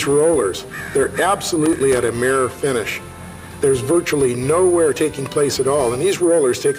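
At 1.66 s a burst of loose connector crackle begins and runs to 2.08 s, just under half a second of irregular scratching and crackle. A worn or dirty contact in the signal path is making and breaking as it shifts, chopping the audio on and off. On a waveform this shows as jagged gaps and spikes; a spectrogram shows scattered broadband vertical streaks across that span.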